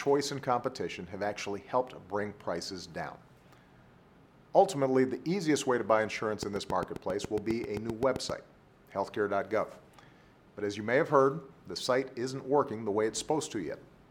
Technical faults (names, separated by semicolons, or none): train of clicks